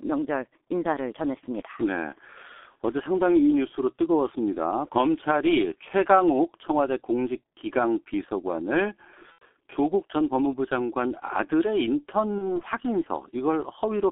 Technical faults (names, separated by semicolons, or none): G.723.1 codec; VoIP packet loss concealed by the speech codec